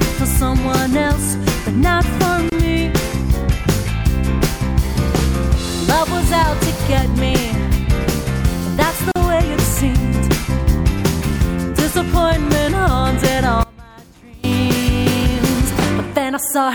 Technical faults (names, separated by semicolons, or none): gap at a join of encoded pieces; one channel inverted